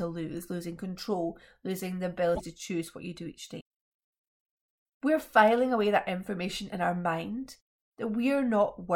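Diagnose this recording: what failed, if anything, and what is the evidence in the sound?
Codec stage, likely a broken MP3 bit reservoir. After "losing control losing the", the audio skips ahead at 2.34–2.41 s, before "to choose what you". A second glitch follows at 3.59 s, after "what you do each". The waveform shows discontinuities. Frames after the cut decode borrowed bytes from the wrong frame.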